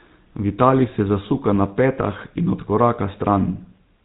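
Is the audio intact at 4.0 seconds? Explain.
No, at 4.0 s the speech still carries GSM full-rate codec damage, as it does throughout: a modelled tract with pulse excitation, a buzzy, gravelly roughness and nothing above 3.9 kHz.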